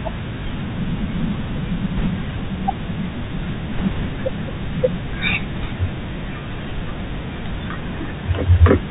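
Throughout, the speech carries Bluetooth CVSD headset codec damage, consistent with a 64 kbps one-bit link: nothing above 4 kHz, scratchy s sounds and granular hiss, unlike wideband codecs' smearing. Bit errors on a Bluetooth voice link hit at 1.98 to 2.06 s, 3.73 to 4.06 s and 5.54 to 5.64 s, with roughly one to two percent of bits flipped. They add rushing crackle rather than the sharp clicks of packet loss.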